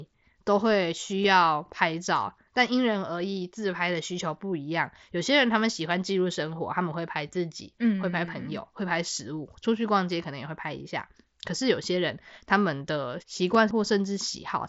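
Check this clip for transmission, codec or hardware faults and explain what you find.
Two brief transmission faults are audible, both riding on the Bluetooth mSBC headset codec, whose light graininess on louder speech can be heard throughout.

Concealed Bluetooth headset packet loss occurs at 1.23 s and 13.54 s. Lost headset packets of 15 ms and 7.5 ms were patched by repeating a matching stretch of recent waveform, so the single lost packet at 13.54 s is nearly hidden, while the two-packet run at 1.23 s gives a brief buzzy tone with a small warble where real audio returns.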